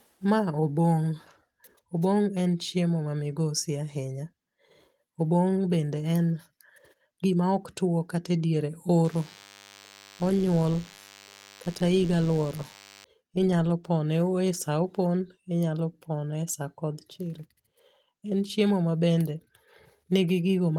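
Speech with a DECT cordless phone buzz from 9.05 to 13.04 s: a thin, steady 100 Hz drone full of harmonics, sitting about 25 dB under the voice. It's a nearby DECT handset or base firing radio bursts every 10 ms, which the audio circuitry rectifies into sound.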